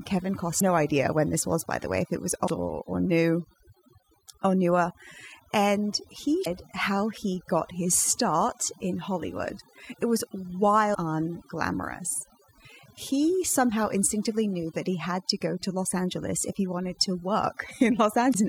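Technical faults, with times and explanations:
Throughout: overdone noise removal. A noise reducer set far too aggressively shuts down individual frequency bands whenever they sit near its noise estimate, so quiet parts of the speech go with them, and the background drops and breaks up into twinkling specks.
0.56–0.62, 2.44–2.50, 6.42–6.47, 10.91–10.96 and 18.30–18.36 s: damaged data in a compressed stream. Corrupted bytes make the decoder misread frames and lose sync until it finds the next header, producing roughly 55 ms blips. They fall before "idea when this was", between "way if it was" and "or or", and before "how he got his".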